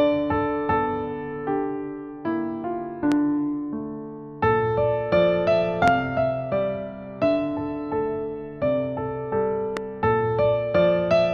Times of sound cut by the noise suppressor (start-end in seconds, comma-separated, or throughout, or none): none